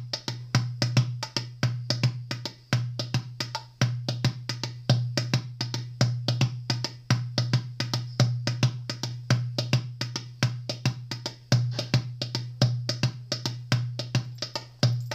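No technical faults are audible.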